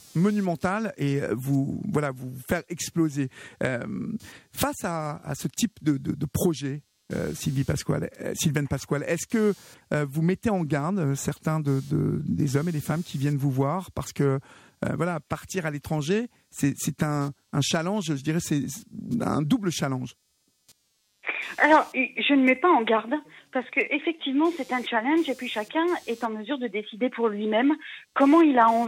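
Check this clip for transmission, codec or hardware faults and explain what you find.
One hardware fault is present for the whole clip: computer activity noise. A buzzing, chirping texture sits under the sound, pulsing at around 200 Hz and roughly 35 dB below the signal. It follows the computer's load, not the audio. Processor, graphics or mouse activity shifts the shared ground of the audio circuit.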